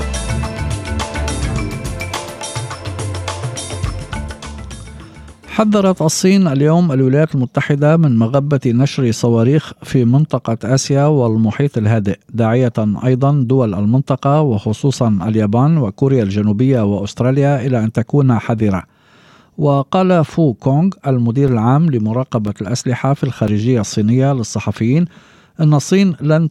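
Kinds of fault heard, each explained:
Periodic USB or driver dropouts: something stalls the audio path once a second, and a few milliseconds of signal are replaced with silence each time. Between 21.48 and 25.48 s, about five evenly spaced ticks cut into the sound at a steady 1.0 s interval.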